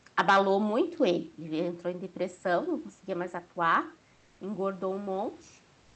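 Right at the start, from 0.18 to 0.4 s, you get what's likely microphone overload: the peaks push roughly 7 dB past the converter's ceiling, a few percent of the samples get their tops flattened, and the loudest syllables pick up a harsh, crackly edge.

Right in the middle of that, at 0.30 s, there's a microphone volume step down of about 2 dB. The voice and the room behind it drop together in one go, the way it sounds when call software spots clipping and most likely pulls the input gain back.

At the very end, from 5.81 to 5.95 s, the background is replaced by comfort noise. For those 146 ms the room's real texture, sitting about 37 dB under the loud parts, turns into flat, featureless hiss roughly 1 dB quieter. That fits a sender that stopped transmitting in silence, like Opus DTX, and a receiver that filled the gap with synthetic noise. Through the call path, the audio tops out around 8 kHz.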